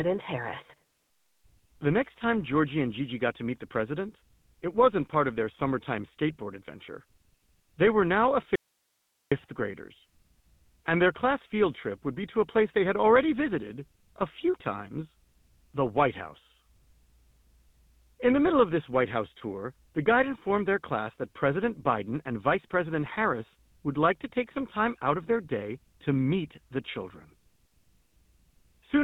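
This is a speech clip carried through the GSM full-rate codec from start to finish. The damage is plainly audible. The voice has a buzzy, gravelly roughness from the pulse-driven vocal-tract model. Nothing survives above 3.8 kHz, which fits the 13 kbps full-rate coder. After "were now", the audio drops out to a faint residue from 8.56 to 9.32 s. That is about 0.76 s. The cut is abrupt. Only hiss remains, roughly 50 dB below the speech. The likely cause is a lost stretch of signal while the path after it stayed live.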